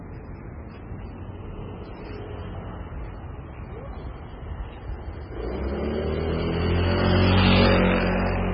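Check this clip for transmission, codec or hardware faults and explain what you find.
There's one problem, and it runs the whole length of the clip: what sounds like MP3 compression, pushed hard. Nothing comes through above 5.3 kHz, so the top end is simply gone and everything feels dull and boxed in. Underneath that the texture goes watery and swirly, because the quieter frequency detail keeps dropping in and out from one frame to the next. Sharp onsets lose their edge too. Damage this heavy likely comes from a very low-bitrate encode, something in the region of 16 kbps.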